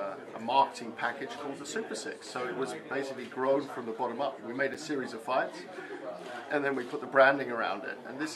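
At 4.74 s there is a gap between stream segments. The boundary falls about 4 s in, consistent with 4-second segments, and the time stamps of adjacent segments fail to line up, leaving roughly 7 ms uncovered. The player fills that interval with digital silence, so the sound drops out abruptly and resumes just as abruptly, a brief hard-edged hole. Nothing is missing from the content; the material is pushed later by the inserted silence.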